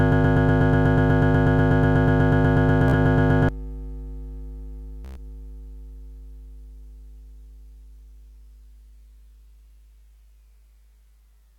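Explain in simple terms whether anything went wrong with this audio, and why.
The music starts with a broken-record loop, most likely caused by the player or stream stalling and resending the last scrap it held. A piece about 0.12 seconds long repeats back to back, already going when the clip begins and continuing until 3.49 s. The music that should have played there is lost.

There is also Bluetooth stutter. When packets of sound arrived late or went missing, the receiver replayed its last small slice until new data came. That makes a brief buzzing stutter at 2.88 to 2.94 s, and a longer one at 5.05 to 5.19 s. Each time, the music picks up further along, skipping what was lost.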